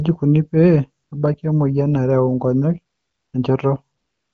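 Speech with AMR comfort noise: the sender stops sending speech during pauses at 1.03–1.11 s, 2.95–3.33 s and 3.97 s to the end, and the receiver fills these gaps with steady, smooth synthetic noise.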